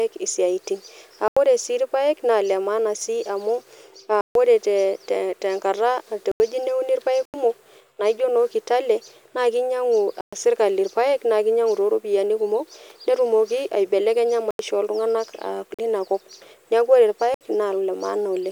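Speech interrupted by blocks of digital silence at 1.28, 4.21 (after "maana sii amu"), 6.32, 7.25, 10.21, 14.51, 15.74 and 17.34 s. Each drops to silence and cuts back rather than fading, and four identical 85 ms holes fit a 4096-sample output buffer left unfilled.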